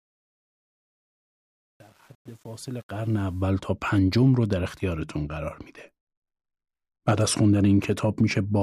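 From the start to 3.43 s the speech rises out of a gritty texture, worst up to 2.98 s. This is truncation distortion on the fade-in: the gain stage kept too few bits, which fits 8-bit word length, and added no dither.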